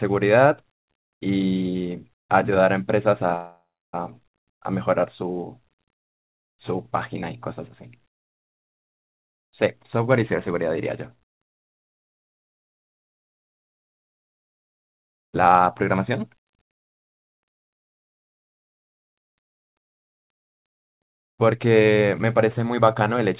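At 3.36 s a call audio freeze stops the speech for 0.59 s. The last sound rings on as a fading buzz, then about 0.31 s of silence. Delayed packets likely emptied the jitter buffer. The speech resumes where it stopped, with nothing lost.

From 9.99 to 13.49 s a jitter buffer speed-up runs the speech about 4% fast. Short pitch-period pieces are cut repeatedly to shed roughly 0.15 s of backlog. The pitch stays put. A sharper speed-up follows from 16.96 to 17.78 s, about 21% fast, again trimming roughly 0.15 s.

At 17.81 s a second freeze lasts 0.97 s and is almost entirely silence. A third speed-up, from 20.23 to 23.29 s, runs about 7% fast and cuts roughly 0.2 s. Throughout, the telephone-band codec leaves nothing above 4 kHz.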